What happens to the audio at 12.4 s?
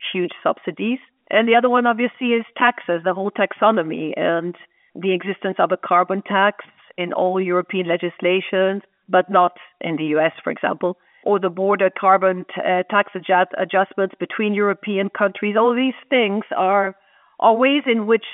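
Nothing goes wrong at 12.4 s; the speech is intact there, heard through the usual narrow band of G.711 telephone coding.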